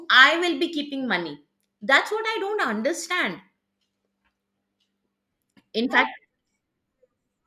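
No technical faults can be heard anywhere in the speech.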